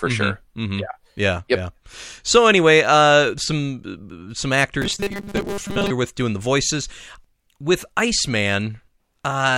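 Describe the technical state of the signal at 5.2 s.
At 5.2 s the speech is inside a burst of robotic sound from repeated short buffers (4.82 to 5.91 s), likely from the same 5 ms slice being looped while most real audio is skipped. It becomes a rigid 200 Hz metallic buzz, seen as evenly spaced horizontal harmonics and a periodic waveform.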